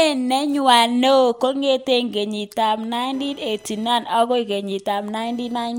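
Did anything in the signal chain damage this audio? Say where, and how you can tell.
Yes. Computer activity noise enters in the analogue wiring from 3.13 s, just after "kengit ab", and continues to the end. Load changes on a shared ground add a chirping buzz pulsing around 1 kHz, about 35 dB below the speech, visible as regular vertical striations independent of the speech.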